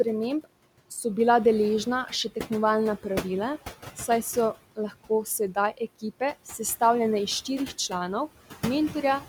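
A speech recording with noise suppressor artifacts throughout. The room noise, sitting about 15 dB below the speech, is pulled down by about 16 dB whenever the suppressor judges a frequency band to be steady noise. It therefore sinks in the pauses and swells back under the speech. That band-by-band, pause-following rise and fall separates it from a simple noise gate, which shuts everything at once, and from codec artefacts, which don't track the gaps in speech. Between 4.76 and 5.57 s there is speech cut by the noise suppressor. Quiet parts of the speech were mistaken for background and turned down with it, by as much as about 15 dB, over roughly a tenth of a second in total. Those sounds come across as swallowed or faint rather than missing, and the background ducks along with them. A packet-loss dropout would instead leave abrupt silence or a repeated fragment.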